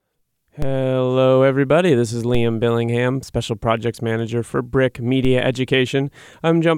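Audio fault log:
0.62 s, 2.35 s, 5.25 s: DC step. Three times the waveform's zero line suddenly jumps off centre, by about -13 dBFS at the first two and about -15 dBFS at the last. Each jump lands as a dull low thump or click under the speech, which carries straight on. The offset doesn't hang around. It bleeds away through something acting like a 2 Hz high-pass, so the baseline settles back within a fraction of a second.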